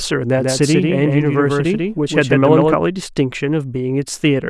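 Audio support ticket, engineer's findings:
Doubled audio track, 0.38–2.74 s: full-band copy 150 ms late, about 5 dB down, abrupt edges. Spectrogram shows ghost onsets offset right. Likely second capture path.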